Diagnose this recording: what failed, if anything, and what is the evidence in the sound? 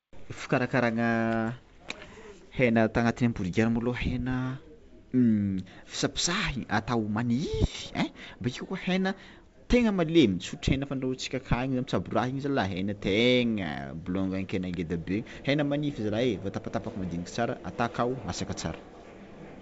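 Nothing in the recording has failed; no stage from wiring through to playback leaves a mark on the sound. The speech carries the bandwidth of G.722 wideband telephone coding at 64 kbit/s, reaching up to about 7 kHz, with at most a faint hiss in the upper band from that codec.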